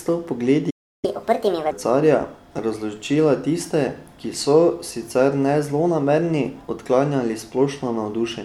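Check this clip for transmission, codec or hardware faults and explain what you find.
Two playback faults sit near the start of the speech. A playback stall from 0.70 to 1.05 s silences the output for about 330 ms mid-flow, likely because the player's buffer ran dry or its thread was blocked. Catch-up at higher speed follows from 1.05 to 1.71 s: the player resamples its backlog at 1.5 times normal rate, raising pitch by roughly seven semitones before settling back.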